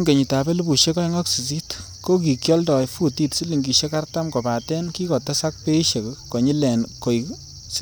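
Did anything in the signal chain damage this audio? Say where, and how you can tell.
No, nothing along the chain, from capture through to playback, left an audible mark on this speech recording.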